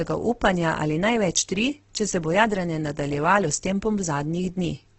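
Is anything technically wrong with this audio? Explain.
Yes. Throughout the speech there is heavy damage from what is likely Opus compression. Nothing is present above about 8.2 kHz, a wideband limit, and the remaining bands sound rough and grainy. When bits ran short, the encoder kept each band's energy but filled its detail with noise or folded copies of lower bands. That points to the music (CELT) mode at a low rate near 12 kbps. A spectrogram shows a hard ceiling at 8.2 kHz and smeared, noise-textured harmonics below it.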